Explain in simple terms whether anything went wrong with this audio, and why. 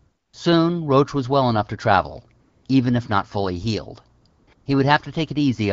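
During the pauses the real background drops out and a smooth, steady hiss takes over, at 0.00 to 0.33, 2.41 to 2.65, 4.21 to 4.25, 4.27 to 4.47 and 4.53 to 4.65 seconds. This is AMR comfort noise: the phone decided nobody was talking, stopped sending sound, and the receiving end filled the gap with artificial noise. The clear speech between those gaps comes through the AMR wideband (HD Voice) codec.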